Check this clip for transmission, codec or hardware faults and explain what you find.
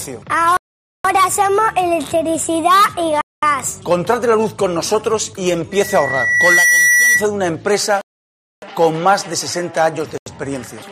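Two problems here: repeated dropouts and a feedback squeal.

From 0.57 to 1.05 s, 3.21 to 3.43 s, 8.01 to 8.62 s and 10.18 to 10.26 s the sound cuts to silence and then resumes, most likely a Bluetooth stall where interference delayed packets and the buffer ran dry.

From 5.72 to 7.25 s there's a loudspeaker feedback squeal: a mic hearing its own speaker, with loop gain over one at 2 kHz, swelling over roughly a second to around 5 dB above the sound.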